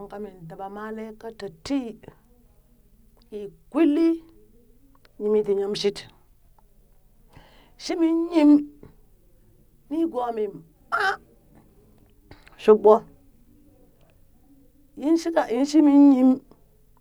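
No technical faults turn up anywhere in this speech recording. There is nothing to place on a timeline.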